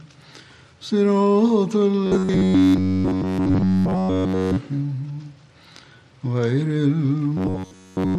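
Robotic sound from repeated short buffers at 2.07–4.58 s, entirely, and mostly at 7.37–8.18 s: likely 10.7 ms fragments replayed, forcing a rigid metallic 93.8 Hz buzz.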